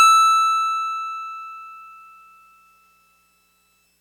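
No technical faults can be heard in this music; the signal stays intact and continuous throughout.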